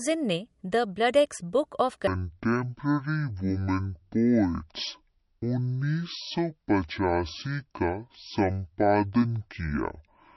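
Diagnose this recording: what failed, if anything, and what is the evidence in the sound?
The speech sounds watery and swirly throughout, with smeared consonant attacks. The plainly audible artefacts point to the codec stage, likely MP3 compression at a starved rate fitting about 48 kbps.

From 2.07 s, just before "जो उस समय ब्रिटिश", to the end, the speech turns deep and drawn out. It plays at 0.52 times normal speed and sits roughly ten semitones lower. This is a section at the wrong speed, likely from playback or editing run against the wrong clock.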